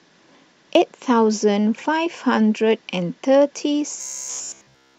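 From 4.01 s to 4.98 s, speech becomes a metallic 66.8 Hz buzz, robotic sound from repeated short buffers. A 15 ms buffer likely loops throughout.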